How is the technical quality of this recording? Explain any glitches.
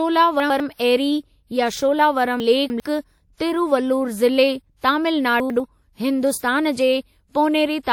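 The recording has one recurring glitch: chunks out of order at 0.4–0.6 s, 2.4–2.8 s and 5.4–5.6 s. A 100 ms block plays one, three, then one chunk late, briefly jumbling the speech.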